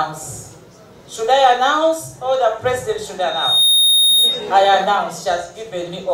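A microphone is picking up the loudspeaker it drives, closing a loop whose gain passes one near 3.7 kHz. This is loudspeaker feedback squeal: from 3.20 to 4.51 s a single tone swells over roughly 0.4 s and then rings a few decibels above the rest of the sound.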